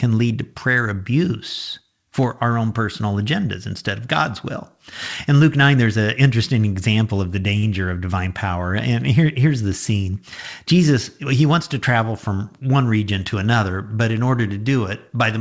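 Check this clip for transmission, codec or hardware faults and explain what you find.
One transmission fault, heard in speech that carries nothing above 8 kHz, which fits a wideband call codec such as G.722.

Between 7.58 and 7.65 s, after "interesting example of the" and before "of divine power", there is a short stall from a late packet. The jitter buffer ran dry and the receiver stretched the last sound by about 48 ms, so that sound is held too long with a slight buzz or dip, but nothing is lost.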